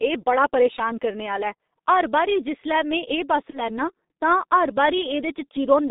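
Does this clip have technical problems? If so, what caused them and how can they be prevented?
Yes, two. The whole clip runs through a G.723.1 codec: the sound is squeezed into a band of roughly 200 Hz to 3.7 kHz, heavily muffled and hoarse, with smeared consonants, which fits its low 6.3 kbit/s mode and slow-updating voice model. Avoid it by choosing a wideband codec like Opus or G.722.

Then at 3.50 to 3.59 s there's VoIP packet loss concealed by the speech codec. A gap that fits a single 30 ms frame got filled by the decoder stretching the last sound and fading it out, and it takes a beat to recover afterwards. A jitter buffer plus forward error correction on a steadier network would help here.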